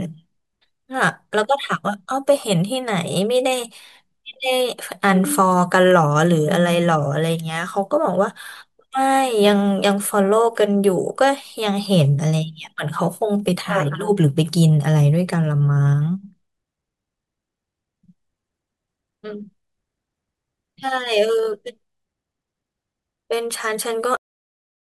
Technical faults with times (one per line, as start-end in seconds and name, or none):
24.17-24.92 cut-off end